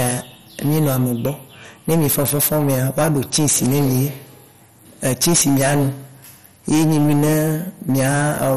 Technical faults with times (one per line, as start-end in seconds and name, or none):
0.00-8.57 hard clipping
0.00-8.57 MP2 compression